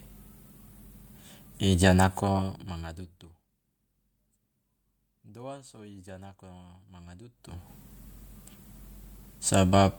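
At about 2.32 s, just before "manga dutu", there's a short concealed packet loss: roughly 20 ms never arrived, so the decoder patched it, leaving a quick smear.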